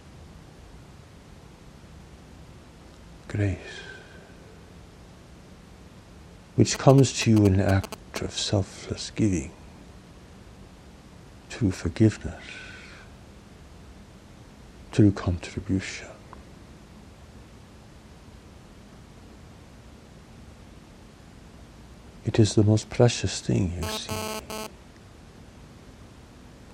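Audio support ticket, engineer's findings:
GSM signalling bursts, 6.75 to 8.18 s. Galloping dit-dit-dit of short 217 Hz buzzes, roughly 5 dB under the signal. Nearby 2G phone signalling, rectified by the audio circuit.

GSM phone buzz, 23.83 to 24.67 s. Hard, raspy 217 Hz buzz with many harmonics, about -7 dB relative to the signal. Phone transmitting data in bursts, rectified in the audio path.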